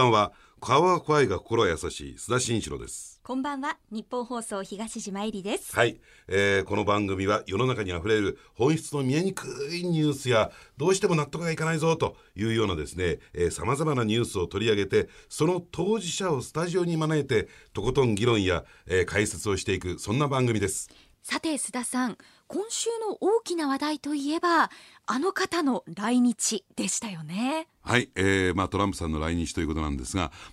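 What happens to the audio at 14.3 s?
Nothing goes wrong at 14.3 s; the speech carries on intact through that point, with no dropout, click, distortion or other fault.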